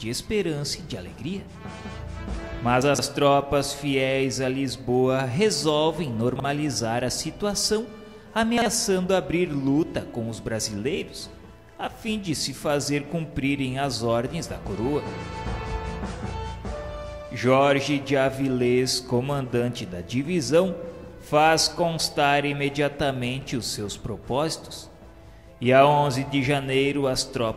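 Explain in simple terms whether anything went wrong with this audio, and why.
Three short jumbled moments come from chunks out of order, at 2.82 to 2.99 s, 6.36 to 6.44 s, and 8.58 to 8.66 s. A small slice of sound, about 43 ms long, played late, after the pieces meant to follow it. Nothing is missing, but the order is scrambled, with hard joins.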